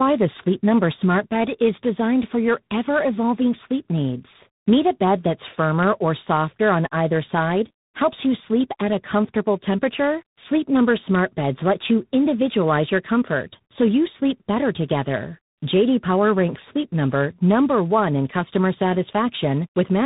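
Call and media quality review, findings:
Tandem speech coding, throughout. Band ends near 3.8 kHz; rough, noisy and warbly, pointing to an AMR-NB-type leg re-coded via G.711 into G.726 at about 24 kbit/s. Each codec re-encodes the previous one's degraded output, so errors stack.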